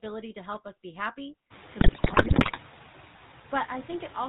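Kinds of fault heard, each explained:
noise suppressor artifacts: The suppressor lowers bands it judges to be steady noise, frame by frame, but here it takes only about 3 dB off, so the room noise, which rises by about 22 dB around 1.5 s to sit about 15 dB below the speech, stays clearly present. On a spectrogram the noise floor shows patchy, shifting speckles between the speech harmonics rather than a smooth grey wash.
GSM full-rate codec: The speech passes through the original GSM full-rate coder, which fits a 13 kbps stream. It models the vocal tract and excites it with sparse, regularly spaced pulses, leaving a plainly audible buzzy, gravelly roughness across the whole clip. A spectrogram shows a hard ceiling at 4 kHz with nothing above it, and harmonics that look smeared and grainy instead of clean, evenly spaced lines.
GSM bit errors: From 1.80 to 2.58 s the decoder is fed corrupted data, which fits a bit error rate of about 6% hitting 37 frames. 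Wrong filter, pitch and gain values make the speech break into squawks, pops and gargling here. The waveform shows sudden level spikes in 20 ms blocks, and the spectrogram shows frame-wide smears of misplaced energy and abrupt vertical edges across that stretch.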